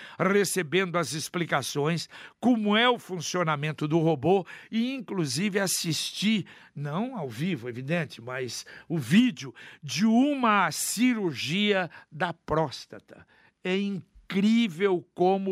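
Speech recording with no technical faults to report. Nothing in the audio points to a dropout, distortion or other transport or processing problem at any point.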